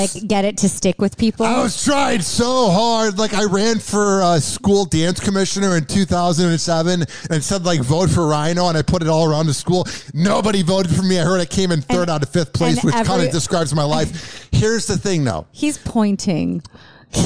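Nothing in this audio stood out as a technical problem on listening.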